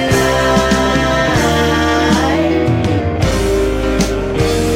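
From 2.34 to 2.99 s, a drift correction step: speed jumps 5.45% and pitch rises 91.8 cents, likely from clock-matching playback, then snaps back, unlike wow's continuous wavering.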